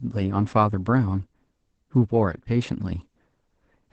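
Throughout, the speech sounds muffled and slightly robotic, with nothing above 8.6 kHz. This is Opus voice compression in SILK wideband mode, which fits a rate near 12 kbps.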